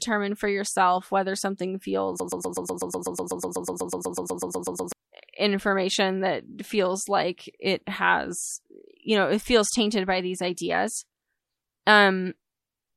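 From 2.2 to 4.92 s, a broken-record loop: a 124 ms fragment repeats 22 times. Likely a stalled player resending its last buffer. The speech there is lost.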